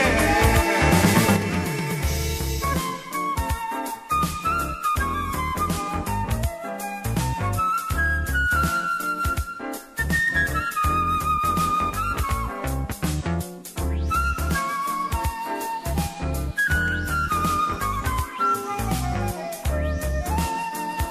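One channel drops out from 1.36 s to the end: the sound abruptly falls about 6 dB, likely because one stereo side is lost before the mono sum.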